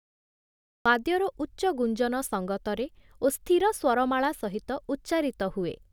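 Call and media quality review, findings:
Digital silence to 0.86 s, then speech jumps in abruptly mid-sound with no natural attack. Cut-off start: capture or stream began late, truncating the onset.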